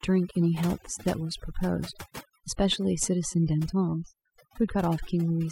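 Across the whole clip the speech sits over a near-silent, twinkling background: overdone noise removal, switching off frequency bands near the estimated noise floor, quiet speech included.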